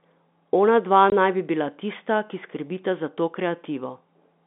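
At 1.10 s to 1.12 s the speech drops out for 20 ms, a case of packet loss filled with silence. The gap length fits a single lost 20 ms packet. The receiver had nothing to play for that slot and inserted silence rather than concealing it, so the signal cuts to silence and resumes abruptly, leaving a brief hole with hard edges. The surrounding narrowband telephone sound, consistent with G.711 mu-law, continues on either side.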